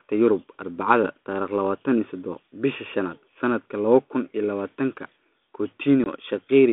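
Packet loss on an ADPCM call hits at 6.04 to 6.07 s: a 20 ms gap, roughly one packet, drops out and is filled with silence, leaving a hard-edged hole near the end of the speech. Because the decoder's adaptive predictor and step size lose track of the sender's during the gap, the speech comes back with brief, slight distortion, settling within some tens of milliseconds on this light-damage 32 kbit/s G.726 line.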